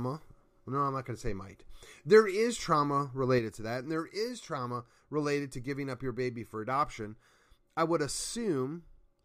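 From 3.39 s, right after "is trauma", the speech abruptly drops about 6 dB and stays quieter to the end. This is likely one channel drops out: one stereo side goes silent, so the mono sum loses half its shared signal.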